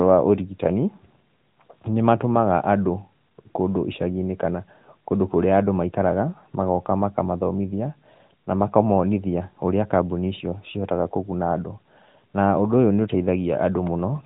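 Speech throughout carries AMR narrowband mobile codec damage: a plainly buzzy, synthetic tone that fits a 10.2 kbps mode, and a spectrogram empty above 3.8 kHz.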